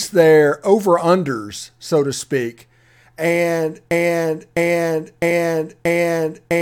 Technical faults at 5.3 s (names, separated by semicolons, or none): broken-record loop; compressed frames skipped